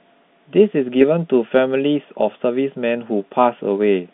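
No faults are audible in the speech, which carries the narrow band of G.711 telephone coding, about 150 Hz to 3.6 kHz.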